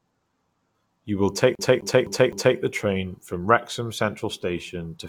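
From 1.55 to 2.58 s, the speech stutters as one 256 ms fragment repeats four times: a CD stuck on one turn, the laser jumping back each rotation.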